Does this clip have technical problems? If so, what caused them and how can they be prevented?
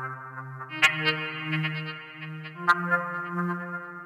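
Yes. There is hard clipping in two places. The first runs from 0.83 to 1.09 s. The level there is about 7 dB beyond what the chain can pass, so the peaks are sliced flat. The second is brief, from 2.69 to 2.71 s, overdriven by about 5 dB. The squared-off tops create high harmonics, heard as a harsh crackle. To prevent it, lower the input gain or leave more headroom before conversion.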